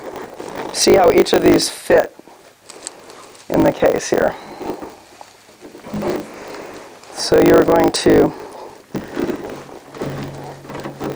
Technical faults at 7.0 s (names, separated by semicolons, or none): block size mismatch (truncated)